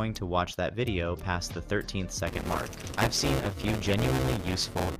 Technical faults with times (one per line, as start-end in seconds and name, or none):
2.26-4.96 buffer tearing